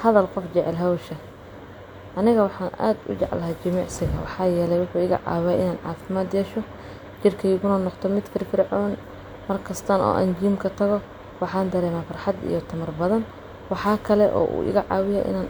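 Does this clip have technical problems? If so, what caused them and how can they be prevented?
No, this clip has no technical problems, so there is no cause to identify and nothing to prevent.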